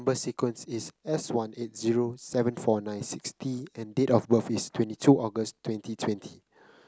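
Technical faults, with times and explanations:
Nothing technical goes wrong anywhere in this bit of speech, so there's nothing to flag here.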